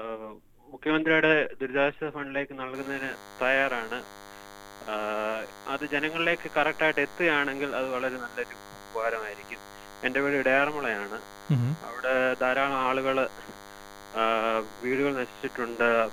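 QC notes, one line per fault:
2.74–16.13 s, DECT cordless phone buzz: a nearby DECT handset or base station transmits a radio burst every 10 ms, and the audio circuitry rectifies it into the signal, leaving a thin, steady 100 Hz buzz full of harmonics, roughly 20 dB below the sound, until the end.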